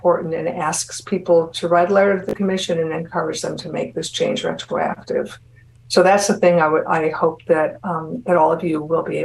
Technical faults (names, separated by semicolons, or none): Bluetooth stutter